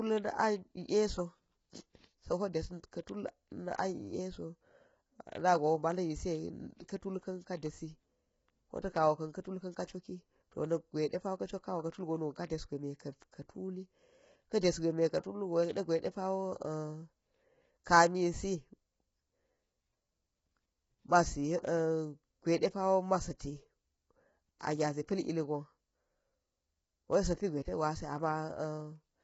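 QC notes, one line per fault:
Throughout: low-delay AAC compression, likely from AAC-ELD at a low bitrate, with damage that fits roughly 16 kbps. Short transform frames resolve the pitch harmonics poorly, so the speech sounds rough and grainy, noise fills the gaps between harmonics, and nothing remains above 7.7 kHz.
3.78 s: pre-echo, a hiss about 12 ms long just before a sharp attack. The codec spread quantisation noise sized for the loud onset across the whole block, so it leaks into the quiet moment ahead and blurs the attack.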